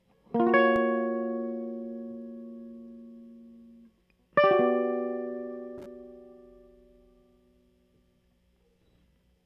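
No technical faults can be heard anywhere in this music; the signal stays continuous and stable throughout.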